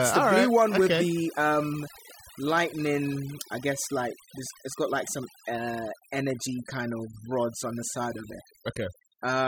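Overdone noise removal runs throughout the speech. The noise suppressor was set too aggressively, so it cuts frequency bands near its noise estimate and takes quieter parts of the voice with them. Gaps fall to near silence with twinkling specks.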